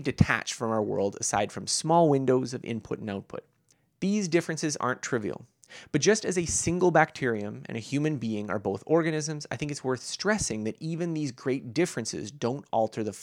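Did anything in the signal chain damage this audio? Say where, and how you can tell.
No, nothing along the chain seems to have hurt this speech recording, so there's nothing here to track down.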